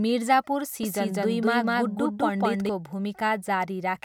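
A second, slower capture path or an edit holding two unaligned copies is likely to blame for the doubled audio track in this speech recording. From 0.83 s to 2.69 s the same speech is mixed in twice, with a full-band copy trailing about a fifth of a second behind at roughly the original's level. The copy carries no decay or room colour, and it starts and stops abruptly at those points rather than fading.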